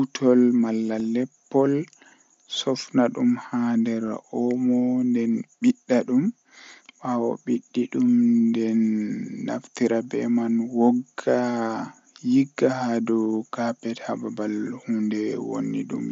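Speech, with two brief hiccups at 0.99 s and 4.08 s, each only about 7.5 ms long. They sound like tiny smeared repeats rather than clicks or gaps. This is concealed Bluetooth headset packet loss: a single voice packet between headset and phone went missing, and the receiver filled the hole by continuing the waveform from the best-matching stretch of the preceding 20 milliseconds or so. That is why each loss is nearly hidden, all of it heard through the mSBC headset codec's 8 kHz bandwidth and light grain.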